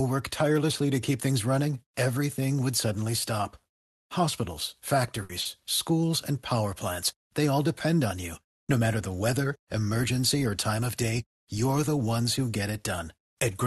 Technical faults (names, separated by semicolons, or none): burst of packet loss; short stall from a late packet